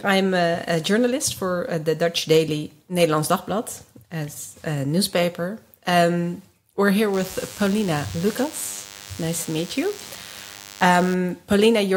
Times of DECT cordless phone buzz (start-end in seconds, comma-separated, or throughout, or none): 7.14-11.14